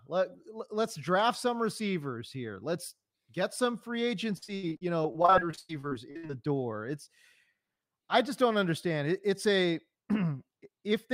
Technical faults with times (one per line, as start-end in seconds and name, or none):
4.37-6.31 repeated packet loss (robotic sound)